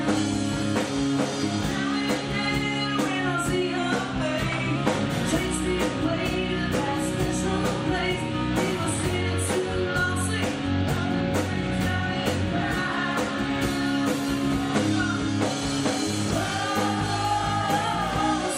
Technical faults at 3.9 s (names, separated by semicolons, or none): drift correction step